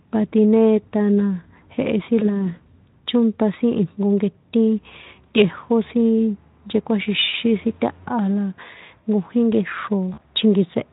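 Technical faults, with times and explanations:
2.19–2.50 s, 7.29–7.35 s, 10.13–10.22 s: VoIP packet loss concealed by the speech codec. Roughly 20, 40 and 40 ms drop out, and the Speex decoder smears the last sound into a fading buzzy tone or coloured noise that lingers briefly.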